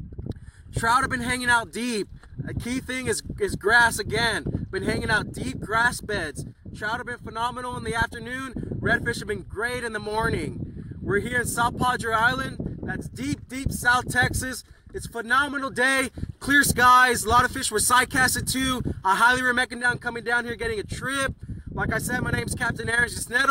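Over the last second or so, from 22.29 s to the end, the audio takes on a fast flutter, its level pumping by about 6 dB around twenty times a second. This is overlap-add ripple: frames were rejoined with overlaps whose gains don't sum evenly.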